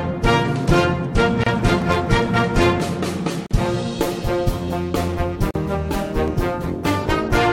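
At 1.44 to 1.47 s the sound breaks into a silence of about 30 ms, a gap at a join of encoded pieces. Separately encoded segments were joined with each encoder's start-up delay and end padding left in. On a spectrogram it shows as a blank vertical band with slightly smeared edges, and the sound then resumes where it stopped. At 1.82 s a single sharp click appears as a thin vertical line on the spectrogram and a sudden step in the waveform, likely dropped samples amounting to well under a millisecond. The same pattern repeats. Another silent join at 3.46 to 3.51 s, about 43 ms, is followed by a click at 3.66 s. A third gap of about 43 ms at 5.51 to 5.55 s is followed by a final click at 6.28 s. The gaps recur every 2.0 s, matching the boundaries of the joined pieces.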